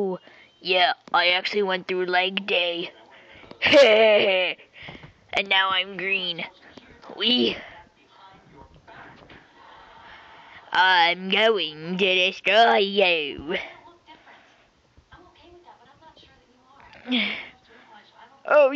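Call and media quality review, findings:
No findings in this call and media quality review: nothing in the audio calls for a ticket.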